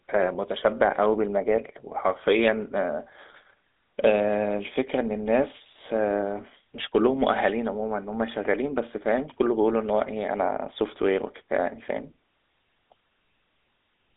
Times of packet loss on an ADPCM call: none

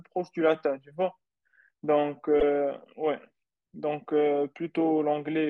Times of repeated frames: 2.39-2.44

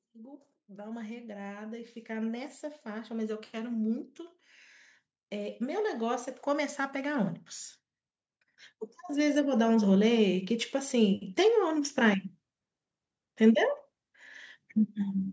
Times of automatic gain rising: 0.05-4.11, 5.30-7.39, 9.06-12.29

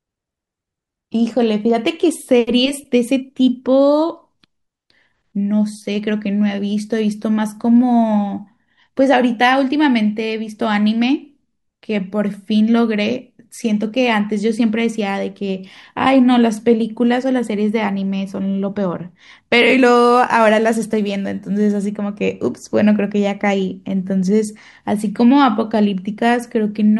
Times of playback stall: none

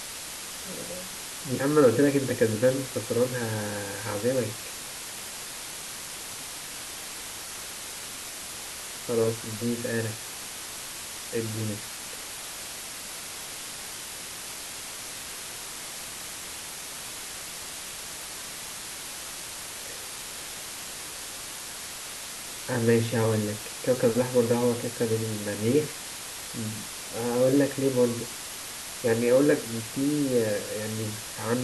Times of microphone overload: none

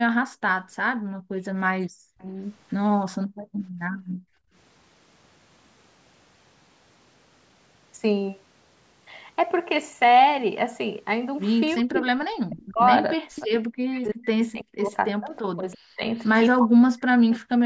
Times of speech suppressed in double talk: 1.89-2.39, 3.40-3.98, 11.74-17.55

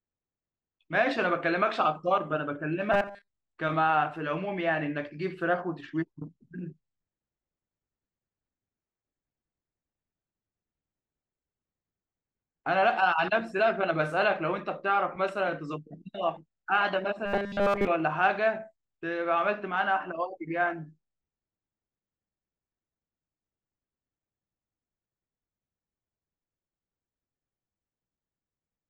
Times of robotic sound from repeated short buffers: 2.92-3.28, 17.26-17.87

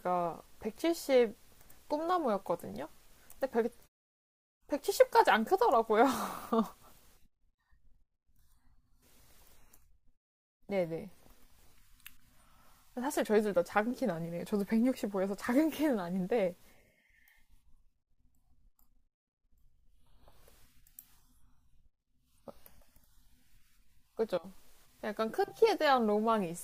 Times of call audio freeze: none

